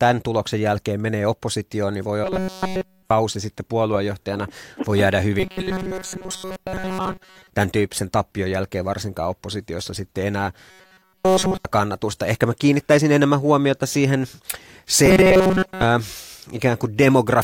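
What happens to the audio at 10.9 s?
Robotic sound from repeated short buffers, 10.71 to 11.65 s: a roughly 5 ms chunk, likely replayed in place of missing audio, turns speech into a rigid 188 Hz buzz.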